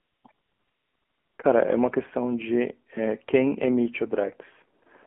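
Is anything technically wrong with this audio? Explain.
Yes. The whole clip carries AMR narrowband mobile codec damage. Sound is confined to about 250 Hz to 3.4 kHz, and the speech has a plainly buzzy, synthetic edge. Both fit AMR-NB at a low rate, around 7.4 kbps, where a few pulses per subframe drive a vocal-tract model. Simple band-limiting would muffle the speech without this buzz.

There is also AMR comfort noise from 0 to 0.24 s, 0.32 to 1.38 s, 4.80 to 4.82 s and 4.84 to 4.86 s. In these spans no speech frames were sent, so the receiver filled in smooth synthetic noise that switches in and out. A noise gate or dropout would leave silence rather than this steady hiss.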